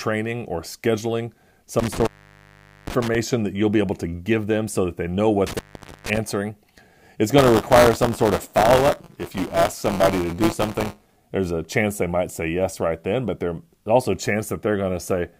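Just after "or scheduling", from 1.79 to 3.15 s, an intermittent contact drops the speech for about 0.80 s, with crackle at each edge, before "that you'll be able". It recurs from 5.47 to 6.17 s after "so that they know", opening for about 0.47 s. A loose plug gives a gap with faint hiss.

From 7.38 to 11.16 s, ending before "there's a chance they", buffer tearing adds a 172 Hz robotic rattle, which fits a 256-sample buffer. Roughly a tenth of each buffer repeats audio from about 20 ms earlier. Unlike the contact fault, the sound never drops out, and the rattle follows the speech.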